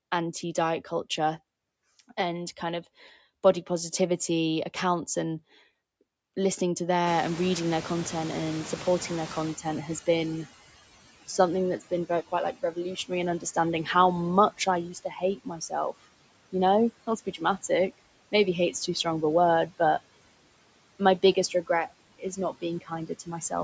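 Noise suppressor artifacts run through the whole recording. The suppressor pulls down whatever bands it judges to be steady noise, frame by frame, by about 20 dB. The background therefore dips in the gaps and swells back under the speech. The call's microphone band limit, with nothing above 8 kHz, is a separate matter.

At around 7 s the room noise jumps by about 25 dB, and the noise suppressor catching up is audible from 7.06 to 10.51 s. The suppressor's noise estimate trails the new level, so at first the louder background comes through with little reduction. It then sinks over about 3.45 s as the estimate adapts, settling at roughly 16 dB of cut. Afterward the room noise sits about 17 dB below the speech.

Speech cut by the noise suppressor follows in four stretches, where the suppressor mistook parts of the speech for noise and turned them down with the background. From 11.79 to 13.88 s the deepest drop is about 15 dB, across roughly a third of a second in total. 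From 14.53 to 16.05 s it is about 19 dB, over about half a second. From 17.07 to 17.99 s it is about 20 dB, over a fifth of a second. From 21.35 to 23.52 s it is about 16 dB, over under half a second. In each stretch the affected speech sounds swallowed or faint.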